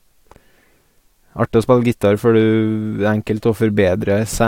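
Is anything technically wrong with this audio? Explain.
No, nothing technically wrong stands out in this bit of speech; it all sounds fine to me.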